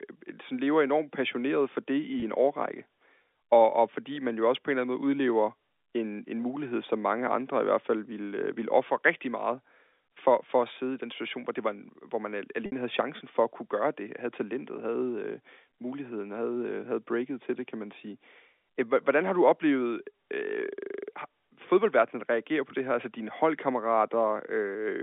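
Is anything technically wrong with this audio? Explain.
Yes. Packet loss with pitch repetition occurs at 2.20 to 2.22 s, after "enormt passioneret for det", and at 12.66 to 12.72 s, before "havde chancen for at". The receiver repeated the last pitch period to cover about 20 ms, then 60 ms, of missing audio, fitting one and three lost packets. The first gap sounds like a briefly held, buzzy tone. The second fades to silence before speech returns through a short cross-fade.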